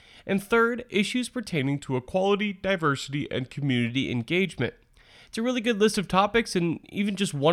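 From 1.59 s to 3.9 s, just after "third issues", a wrong sample rate fault plays the speech back slower than it was recorded, with no conversion, which fits 48 kHz material run at 44.1 kHz. Speed drops to 0.919 and pitch falls 1.47 semitones, so the speech sounds slightly lower and slower.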